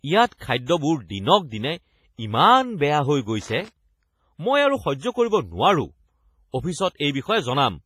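Across the whole speech clip there is a ringing, washy quality with hiss that breathes along with the signal, heavy codec damage, and nothing above 15.5 kHz. This is likely WMA compression, whose long transform blocks smear quantisation noise over time, fitting a low bitrate around 24 kbps.

From 3.42 to 3.68 s an irregular burst of crackle and scratching cuts through the sound. This is loose connector crackle: a worn or dirty contact rapidly making and breaking, chopping the signal into a rough, broken texture.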